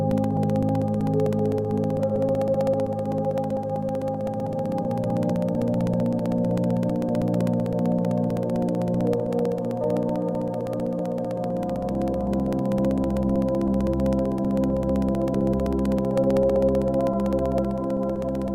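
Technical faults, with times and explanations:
0.11–18.48 s, periodic USB or driver dropouts: the audio path stalls every 64 ms, blanking about 2 ms to silence each time, so steady regular ticks run through the sound.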